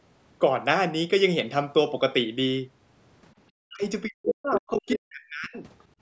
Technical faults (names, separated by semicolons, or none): speech suppressed in double talk; other side's voice leaking through